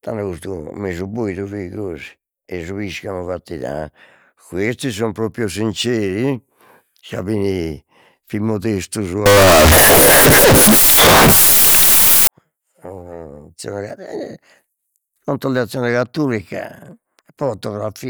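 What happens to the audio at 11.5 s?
At 11.5 s the speech sits inside a stretch from 9.26 to 12.27 s where the samples were likely stored as 32-bit floats but read back as 32-bit integers: a float read as integer fault. The sign and exponent bits then dominate each value, so the waveform collapses into a near-square shape at an almost fixed, high level. The result is extremely loud and harsh, with background noise as loud as the speech, though the pitch still comes through.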